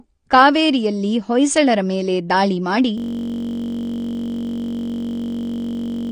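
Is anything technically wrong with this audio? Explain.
Yes, there are two faults. Throughout the clip, the speech sounds dull and smeared. Nothing is present above 9.7 kHz. Sibilants have a fizzy, warbling texture. This is likely AAC compression at a low bitrate, around 32 kbps. The encoder discards high frequencies and coarsely quantises the rest.

From 2.98 s to the end, a system hang loop takes over. One 21.33 ms slice of sound repeats exactly. That gives a steady buzz at 46.9 Hz. The length fits a 1,024-sample ring buffer that kept cycling after the system froze.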